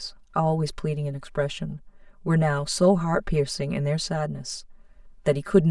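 Throughout the speech, channel delay causes comb filtering: one channel arrives roughly 5 ms late, and summing to mono cancels shared content at evenly spaced frequencies, starting near 100 Hz. The fixed notches leave the sound hollow and phasey.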